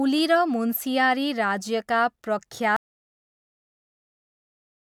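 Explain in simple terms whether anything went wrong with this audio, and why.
At 2.76 seconds the speech stops abruptly and never returns. From there to the end of the clip there is only total silence. This is an audio dropout to silence. The sound from the microphone was most likely cut off, perhaps by a loose connection or an accidental mute, while recording carried on. A natural pause still has faint room noise, and a fade dies away gradually. Here the sound simply vanishes, leaving dead silence.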